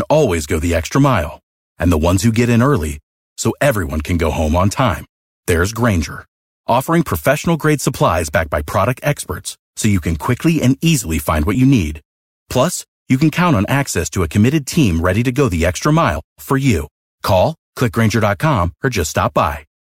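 Compressed frames skipped at 11.55 s and from 16.15 to 16.17 s: the decoder never plays a few whole frames of speech, so the audio jumps ahead by roughly 10 ms and then 20 ms.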